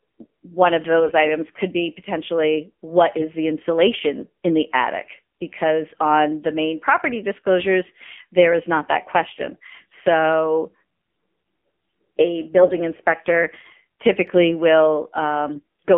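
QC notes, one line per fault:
Throughout: AMR narrowband mobile codec. The speech is confined to roughly 200 Hz to 3.4 kHz, with a buzzy, synthetic edge from a sparse pulse-driven vocal-tract model. The plainly audible coarseness fits a 7.4 kbps mode. A spectrogram shows nothing above 4 kHz.
1.00–1.12 s, 3.18–3.27 s, 8.10–8.15 s, 12.58–12.79 s, 15.52–15.61 s: AMR bit errors. Flipped low-priority bits misplace the excitation pulses and skew gain and spectral detail. Pitch and level hold but turn hoarse and gargly. The spectrogram shows ragged, scattered energy inside the band.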